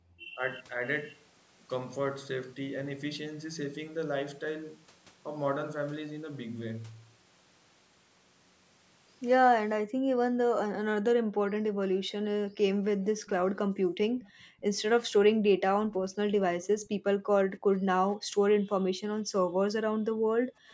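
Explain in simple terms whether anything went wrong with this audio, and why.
Yes, a few things went wrong, all tied to the call's echo canceller.

Background gated by the echo canceller: while the far side's audio was playing, the echo canceller turned the microphone down hard. The room sound briefly vanishes at the very start (0 to 0.07 s), then dips between 9.8 and 20.69 s, about four seconds of gaps in total.

Speech suppressed in double talk: when both sides talked at once, the canceller likely couldn't tell this talker from the loudspeaker echo and turned both down. The talker's speech dips for a moment at 0.35 to 0.41 s, and briefly again between 12.79 and 15.96 s.

Echo leak: one side was likely using a loudspeaker, and its echo canceller let some of the sound through and sent it back. A faint copy of the speech, delayed by about half a second, trails along from 13.26 to 16.88 s and again right at the end, 20.69 to 20.73 s.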